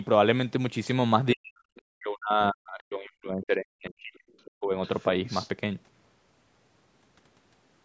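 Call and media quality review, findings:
Speech suppressed in double talk: 1.34–1.66 s, 1.82–4.24 s, 4.57–4.73 s. Talker level dips by up to roughly 40 dB, with the longest stretch around 2 s. Likely echo canceller misreading double talk as echo and attenuating the near end. Waveform: envelope collapses to near-flat. Spectrogram: harmonics fade, upper band thins, patchy gaps below the 8 kHz call-band ceiling.

Other side's voice leaking through: 1.75–1.82 s, 4.45–4.51 s, 4.85–5.07 s, 5.26–5.49 s. Short scraps of a second voice, about 30, 25, 25 and 15 dB below the talker respectively. Likely residual loudspeaker echo not removed by the canceller. Spectrogram: faint, separate harmonic traces. Waveform: low bursts.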